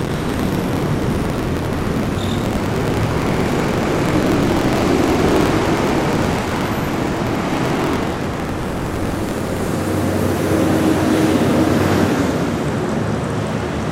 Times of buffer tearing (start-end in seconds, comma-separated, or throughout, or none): 0.00-9.70